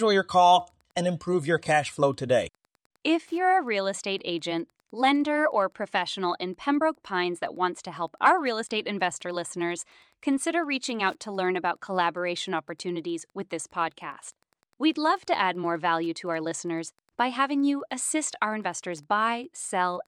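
Throughout the speech there is Wi-Fi interference: a faint, steady ticking about ten times a second, well below the speech at roughly 45 dB down. A nearby Wi-Fi radio's beacon, sent every 102.4 ms, is being picked up and rectified by the audio circuitry, so each transmission becomes a tiny click. The clean 102.4 ms spacing tells it apart from mobile-phone interference, whose bursts repeat far faster and form a buzz rather than separate ticks.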